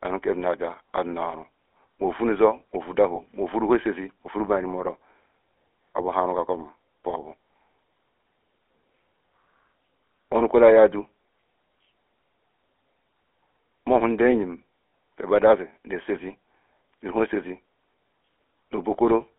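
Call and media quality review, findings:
GSM full-rate codec, whole clip: buzzy, gravelly roughness plainly audible. Band limited to 300 Hz–3.4 kHz. Sounds consistent with 13 kbps full rate. The vocal-tract model is excited by sparse regular pulses, so fine detail is coarsened.

Lost GSM frames, 3.16–3.21 s: short metallic ring. Fits one 20 ms frame. The decoder repeats the last good frame.

Lost GSM frames, 14.88–14.92 s, right after "mohu ndeyim": longer rough ringing hold. Fits two frames, about 40 ms, concealed by repetition.

Lost GSM frames, 18.30–18.32 s: brief ring. Fits one 20 ms frame, replaced by a copy of the previous one.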